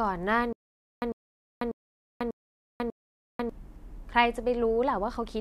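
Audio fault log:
0.53–3.50 s stutter with silent gaps. A 0.1 s speech burst repeats five times, every 0.59 s. Dead digital silence of 0.49 s separates each repeat. A stalled stream likely replayed its last fragment at each retry. The audio due then is lost.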